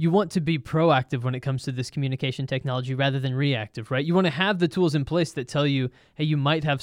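A drift correction step runs from 1.85 to 3.44 s. The speech speeds up by 6.24% and rises 105 cents, just over a semitone, then snaps back. This is likely clock-matching software briefly changing its playback rate to rebalance its buffer.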